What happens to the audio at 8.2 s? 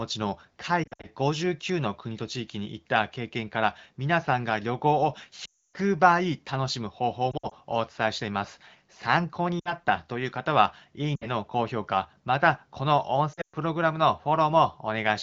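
Nothing goes wrong at 8.2 s: the speech there comes through intact, carried by the AMR wideband (HD Voice) codec at 15.85 kbit/s.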